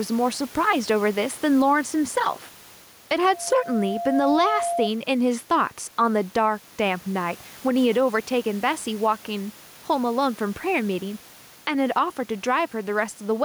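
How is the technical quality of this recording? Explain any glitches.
The recording has two clear problems: gain pumping throughout and a feedback squeal early on.

Gain pumping runs through the whole clip. The level swings by about 5 dB as loud speech is pulled down, which is likely caused by input gain set far too high and a fast limiter or compressor clamping it on every peak. The room noise itself sits about 30 dB below the speech.

A loudspeaker feedback squeal appears from 3.22 to 4.90 s. A single tone at 688 Hz swells over roughly a second until it sits around 5 dB above the speech, then stops. The microphone is hearing the loudspeaker it feeds, and at 688 Hz the loop gain passes one, so that frequency feeds itself. Its gradual, self-sustaining rise at one fixed pitch sets it apart from an electrical hum or a test tone.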